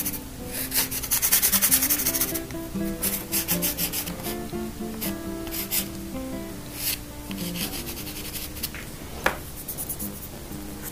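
The audio has a block size mismatch (truncated) from 7.62 s to the end. One stage writes longer blocks than the next reads, which fits 512-sample blocks being cut short, so each block's tail is discarded. The result is a 100 Hz buzz and playback about 1.16 times faster at roughly unchanged pitch. A waveform shows abrupt splices every 10 ms, and a spectrogram shows evenly spaced vertical clicks and harmonic lines at multiples of 100 Hz.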